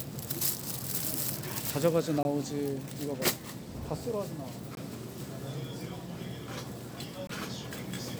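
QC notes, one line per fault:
2.23–2.25, 4.75–4.77, 7.27–7.29 s: gap between chunks, about 21 ms of hard-edged silence every 2.5 s. Unlike a dropout, nothing is lost; sound resumes exactly where it stopped.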